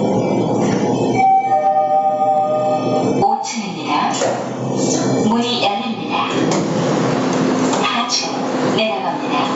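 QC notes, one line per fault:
Throughout: gain pumping. The gain drops by around 25 dB under every loud sound, flattening loud and soft parts together, likely from input gain set far too high with a fast limiter clamping it back. The audio has nothing above 8 kHz.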